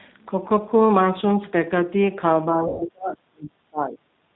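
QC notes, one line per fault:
throughout, G.729 codec: The call was carried by the G.729A codec at 8 kbit/s. It rebuilds speech from a vocal tract filter, a pitch predictor and a few pulses per frame, and passes nothing above 4 kHz. The speech sounds band-limited, rough and synthetic, with plainly audible codec damage.
2.46–4.0 s, speech suppressed in double talk: While both sides were active, the echo canceller likely could not tell this talker from the loudspeaker echo and turned the signal down, by as much as about 40 dB, over roughly one and a half seconds. The speech in this stretch dips, thins or breaks up.
2.68–2.85 s, VoIP packet loss concealed by the speech codec: About 120 ms of audio went missing, which fits six 20 ms packets. The decoder filled the gap by extrapolating from its last pitch and filter at falling gain. The sound stretches into a fading buzzy tone or coloured noise, and the speech stays weak or distorted for a while after packets resume.
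4.28–4.36 s, background gated by the echo canceller: With the loudspeaker playing, the echo canceller clamped down on the microphone. The room sound drops by about 9 dB for under a tenth of a second, right at the end of the clip.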